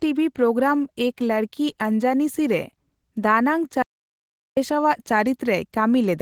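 This speech clip carries Opus voice compression throughout, and the damage is plainly audible: a hoarse, slightly robotic texture from coarse excitation coding, with the band still reaching about 20.2 kHz. That pairing of grainy voicing with an open top end points to hybrid coding near 16 kbps, with a CELT layer above 8 kHz, rather than the dull, narrowed sound of low-pass filtering. From 3.82 to 4.57 s the sound cuts to dead digital silence for about 0.74 s, with no room tone at all. It is an audio dropout to silence, likely from lost input while the encoder kept writing zeros. Packet-loss concealment would have filled that gap with smeared, decaying sound.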